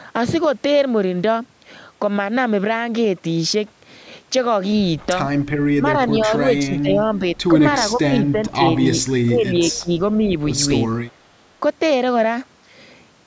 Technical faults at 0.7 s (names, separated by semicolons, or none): none